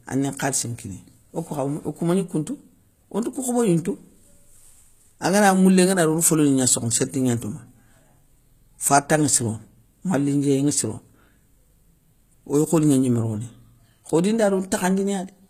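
Throughout, s sounds turn gritty and lispy, with treble that sounds copied rather than real, likely HE-AAC compression at a low bitrate near 20 kbps; spectrograms show repeated high-band blocks ending at 14.9 kHz.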